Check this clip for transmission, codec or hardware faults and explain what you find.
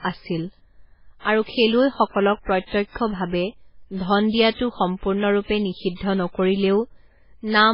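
One fault runs through the whole clip: heavy damage that is most likely MP3 compression. Nothing survives above 5.2 kHz, so the speech sounds dull, and the s sounds come out watery and swirling with metallic chirps. Consonant attacks are smeared. The encoder appears to have been starved of bits, which fits a very low rate of around 16 kbps. It cut the treble at a fixed frequency and switched weak frequency lines on and off from frame to frame. On a spectrogram this shows as a hard, flat ceiling at 5.2 kHz with blotchy, flickering patches below it.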